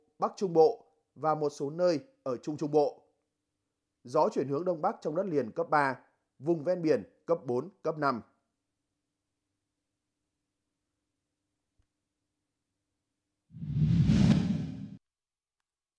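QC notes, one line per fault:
Nothing turned up on this one, so there's no fault to log.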